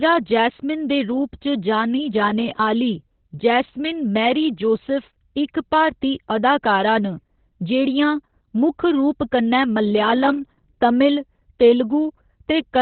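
From start to finish the speech carries Opus voice compression, and it's working hard. Nothing comes through above about 4.2 kHz, so the codec has dropped to narrowband and the voice sounds muffled and boxy. The SILK coder is clearly short of bits, which fits something like 8 kbps. It's rebuilding the voice from a rough prediction with a coarsely coded excitation, so the speech comes out hoarse and a bit robotic.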